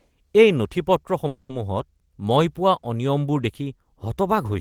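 A short speech recording with a call audio freeze from 1.27 to 1.52 s: the last sound drags on as a fading buzz or hiss for about 220 ms, then drops to about 30 ms of silence. Nothing is lost; the speech resumes where it stopped, about 220 ms late, likely from delayed packets draining the jitter buffer.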